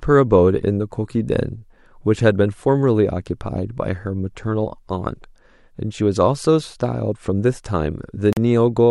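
At 8.33 s the speech cuts out for about 41 ms, until 8.37 s. This is a Bluetooth dropout, likely caused by audio packets reaching the headphones too late and being discarded, with the gap's length fitting two lost packets. It is heard as a brief hole of silence, after which the speech picks up further along, as though it had kept playing. The waveform shows a short near-flat stretch of silence, and the spectrogram a narrow vertical blank band across all frequencies.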